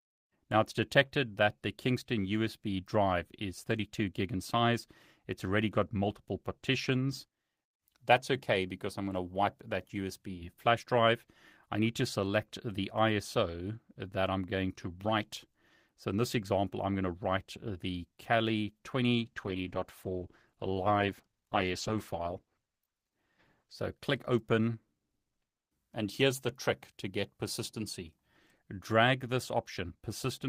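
A call bitrate drop runs from 19.16 to 23.85 s: the bandwidth estimate fell and the encoder was starved of bits, consistent with a fall from 32 to 13 kbps. The speech turns coarse, watery and muffled, its high frequencies gone, until the rate recovers.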